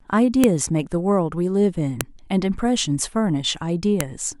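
Sharp, loud clicks snap through the speech at 0.44, 2.01 and 4.01 s: file header played as audio, where joined WAV pieces kept their headers and those bytes sounded as samples.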